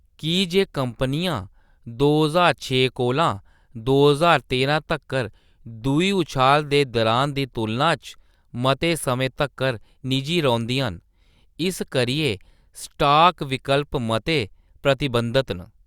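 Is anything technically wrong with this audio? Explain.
No, nothing technically wrong is audible anywhere in this speech recording.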